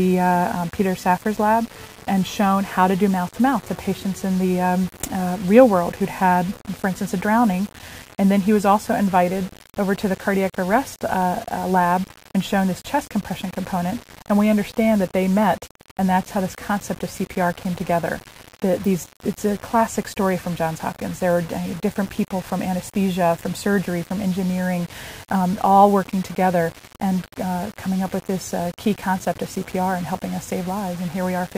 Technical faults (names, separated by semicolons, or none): low bit depth without dither